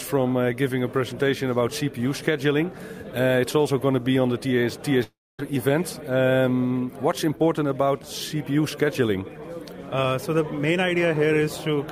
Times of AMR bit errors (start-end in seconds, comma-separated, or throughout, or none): none